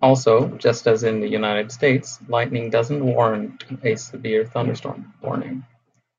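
No technical faults are audible anywhere in the recording.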